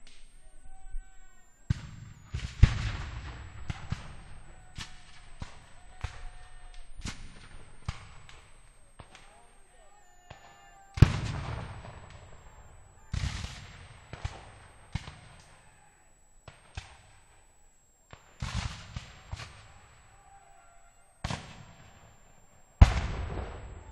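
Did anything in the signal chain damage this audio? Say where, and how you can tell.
Yes, in the analogue power stage: a switching supply whistle runs through the whole recording, a high tone centred near 7 kHz, moving within 6.8 to 9.1 kHz, roughly 35 dB below the sound. A spectrogram shows a thin horizontal line across the clip, from a supply running in an audible burst mode or beating with another one.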